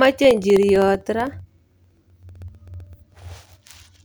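From 0.05 to 3.95 s the speech carries periodic USB or driver dropouts: every 64 ms, around seventy times, about a millisecond of audio is replaced by silence, giving a steady ticking under the speech. The waveform shows evenly spaced flat gaps, the spectrogram thin vertical broadband lines.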